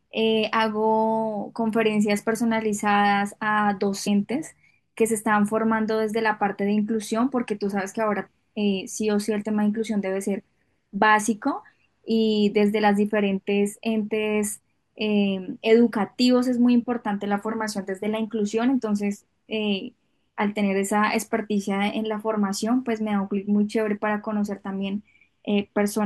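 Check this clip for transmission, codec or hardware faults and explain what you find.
One codec fault stands out: compressed frames skipped at 4.06 s. A short stretch of the speech, about 50 ms, which fits a couple of frames, is simply never played, so the audio jumps forward. On a waveform the envelope shows a small discontinuity; a spectrogram shows harmonics abruptly shifting position.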